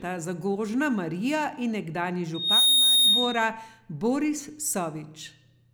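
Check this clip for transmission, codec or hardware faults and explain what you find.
One fault is present in the speech: loudspeaker feedback squeal from 2.34 to 3.49 s. A single 3.7 kHz tone swells over roughly a third of a second to about 10 dB above the speech. The microphone is hearing its own loudspeaker, and loop gain exceeds unity at that frequency, so the tone keeps reinforcing itself until the loop is broken.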